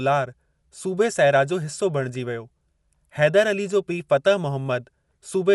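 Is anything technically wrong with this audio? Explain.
Yes. Throughout the speech, the audio has likely been through Dolby Digital compression at a low bitrate, with the damage consistent with something around 64 kbps. Short of bits, the encoder narrowed the band and left many frequency lines without mantissa data, so the decoder filled those gaps with dither noise. Nothing remains above about 11.5 kHz, which makes the speech sound plainly dull, and a rough, fluttering noise clings to the tonal parts of the voice.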